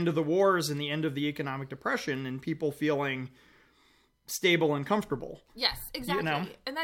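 Nothing in this recording stands out as a technical fault; the audio runs along without anything that needs pointing out.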